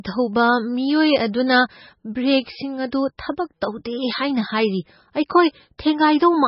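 Throughout the speech, an MP3 encoder likely ran short of bits, which fits a very low bitrate near 18 kbps. That heavy MP3 compression removes everything above 5.6 kHz, dulling s sounds, while weak frequency lines flicker between frames, giving a watery, swirling texture.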